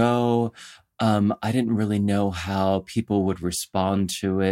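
No technical faults can be heard anywhere in the speech; the signal holds steady, with no breaks, level problems or added noise at any point.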